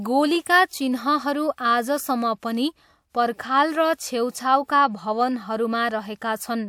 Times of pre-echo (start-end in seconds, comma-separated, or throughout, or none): 0.43-0.71